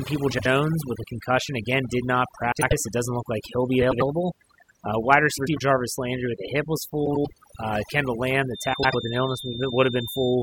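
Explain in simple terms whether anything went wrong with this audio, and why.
Several things went wrong.

Overdone noise removal runs through the whole recording. A noise reducer set too strong wiped out the background and took the quiet parts of the speech with it. That leaves near-silence with tiny twinkling specks. Unlike a simple muffled sound, the damage flickers.

Frames out of order happen six times, at 0.31, 2.52, 3.81, 5.37, 7.05 and 8.73 seconds. Each time, two neighbouring chunks of sound, 72 ms each in the first and 96 ms in the rest, play swapped. You hear a short garbled flutter. Unlike a dropout, nothing goes missing.

A feedback whistle starts at 8.44 seconds and lasts to the end. It is a thin, steady 3.6 kHz tone sitting well below the speech and slowly swelling and fading. The likely cause is a loudspeaker feeding back into the microphone just short of a full howl. Unlike a hum, it is high-pitched and never builds into a howl.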